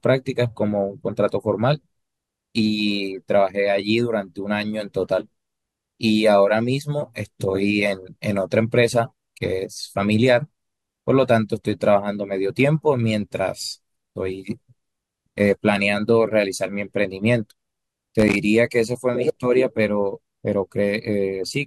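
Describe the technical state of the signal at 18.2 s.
At 18.2 s the speech is hit by loose connector crackle, lasting from 18.20 to 18.36 s. A worn contact is rapidly making and breaking, chopping the signal into an irregular scratchy burst; unlike evenly spaced digital clicks or a clean dropout, the bursts are ragged and uneven.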